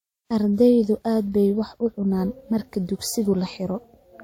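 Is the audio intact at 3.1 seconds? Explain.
No, at 3.1 s the speech carries stacked artefacts of two lossy codecs, present throughout, with nothing above 16.6 kHz. It likely results from transcoding between lossy codecs, consistent with MP3 re-encoded to WMA.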